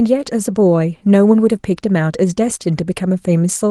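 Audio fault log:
No faults heard in this speech clip.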